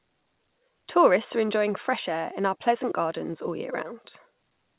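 No faults found in the speech; the call path's band limit is audible, with nothing above 4 kHz, which fits narrowband G.711 A-law at 64 kbps.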